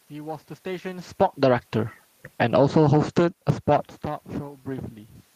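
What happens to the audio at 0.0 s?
At 0.0 s the audio is intact, with no system fault, only the background noise of the room the microphone was in.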